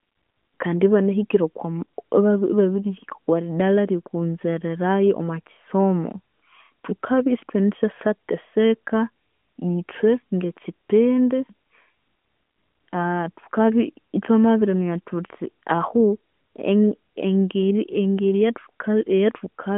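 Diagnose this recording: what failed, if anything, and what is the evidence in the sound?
No fault found in this recording.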